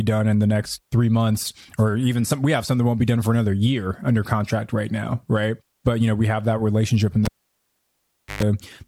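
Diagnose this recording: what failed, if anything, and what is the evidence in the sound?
A cable pulled and plugged in, at the analogue wiring stage: a pop at 7.25 s, about 1.13 s of near silence, a 0.12 s burst of 50 Hz mains buzz as the tip alone made contact, then a second pop at 8.43 s. On a spectrogram, the pops are broadband vertical lines and the buzz is a stack of 50 Hz harmonics.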